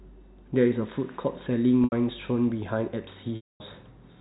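Packet loss with pitch repetition occurs twice in this speech. From 1.84 to 1.92 s, 80 ms of audio failed to arrive, and the receiver looped the last pitch period to fill the gap, producing a short held, buzzy tone. From 3.36 to 3.60 s, the 240 ms gap was too long to bridge that way, so the repeated cycle fades into silence before the speech cross-fades back in.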